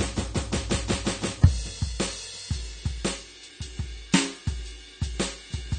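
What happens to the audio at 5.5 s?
At 5.5 s the music carries AAC compression damage that runs throughout the clip. Nothing sounds above 9 kHz, and the top is dull and smeared. A low-bitrate AAC encode is the likely cause.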